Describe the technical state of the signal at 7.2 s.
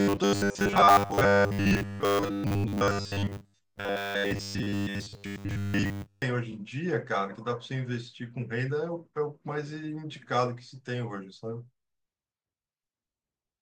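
At 7.2 s the speech signal is intact, with no audible technical fault at that moment.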